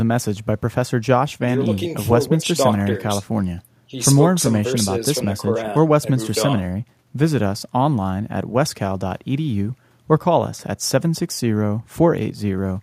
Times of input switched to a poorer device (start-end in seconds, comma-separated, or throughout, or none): none